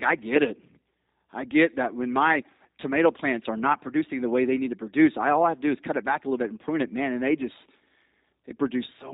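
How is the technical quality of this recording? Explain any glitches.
The speech sounds narrow and slightly buzzy from start to finish, with a rough, synthetic edge on every syllable that is plainly audible. This is G.729 codec damage, present throughout. The codec models the voice as a filter driven by a pitch predictor and a handful of pulses per 5 ms slice, discarding everything above 4 kHz. That sparse rebuild gives the artificial texture and the missing top end, which fits a low-rate telephony codec at 8 kbit/s.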